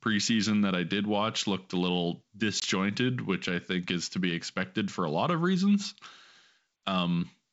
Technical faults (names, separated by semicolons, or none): packet loss on an ADPCM call